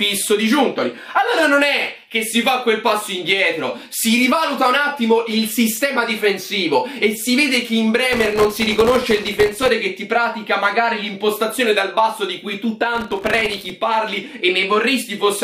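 The audio has two bursts of processor overload crackle, from 8.13 to 9.68 s and from 12.95 to 13.70 s. During each, the processor repeatedly misses its deadlines. Each missed buffer drops out as a tiny hard-edged silence, and together they produce a gritty tearing on top of the sound. The grain fits a very short buffer, well under a millisecond, missed a couple of hundred times in the first burst and several dozen in the second. A waveform shows dense notches of near-silence, and a spectrogram shows broadband vertical streaks across both spans.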